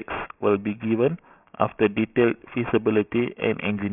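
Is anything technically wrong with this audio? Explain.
Yes. Throughout the speech, sibilants sound gritty and metallic. This is aliasing: content above 3 kHz folded back into wrong pitches, which fits a 16 kHz to 6 kHz resample without filtering.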